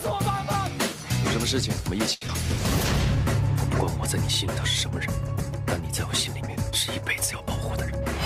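At 2.13 s a packet arrived late and the jitter buffer ran dry, so the receiver stretched the last sound for about 80 ms until the packet came in. It then resumed from the same point and lost nothing, adding 80 ms of delay. The result is a brief held, slightly buzzy sustain ending near 2.22 s.

At 2.27 s there is a short concealed packet loss: about 40 ms of audio never reached the decoder in time. Only around 8 ms was filled by continuing the preceding sound before blending back, and the delay dropped by roughly 30 ms. This is heard as a quick smear or wobble.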